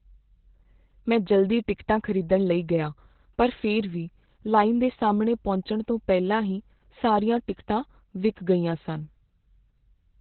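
From start to finish the speech carries Opus voice compression, and it's working hard. Nothing gets through above about 4.2 kHz, so everything has that narrowband, phone-line muffle. On top of that the SILK coder is only roughly modelling the excitation, which leaves the voice hoarse and a bit robotic. The damage is heavy enough that it points to a bitrate down around 8 kbps, where the codec has to throw away a lot to keep up.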